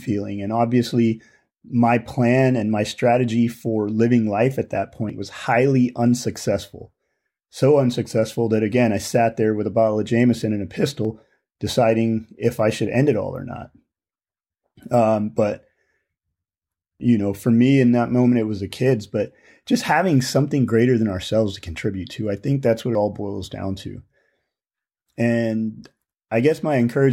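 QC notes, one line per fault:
5.10 s, 11.05 s, 17.00 s, 22.95 s: audio missing between chunks. Each is a sudden skip of around 50 ms, with the two sides butted together and no silence. They fall roughly every 6 s, for example between "and a" and "deciding if I should", just before "know for me in", and between "I think that's what" and "all boils down to". The regular spacing points to chunked processing, likely losing a piece at each 6 s boundary.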